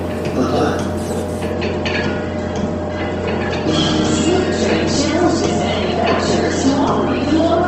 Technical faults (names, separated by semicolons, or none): adaptive stream at a lower bitrate